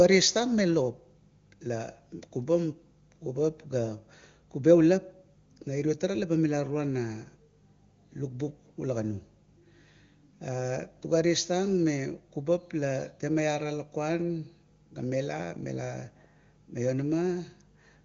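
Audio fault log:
No faults; the speech is heard as intended.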